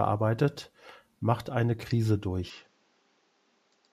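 At 2.5 s the speech turns duller and a bit quieter, topping out near 7.6 kHz with faint new background noise, likely the input switched to a poorer device.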